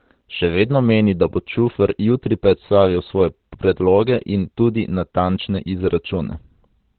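Throughout, the speech sounds muffled, narrowband and hoarse rather than swirling like MP3, likely Opus compression in its SILK speech mode at a low rate.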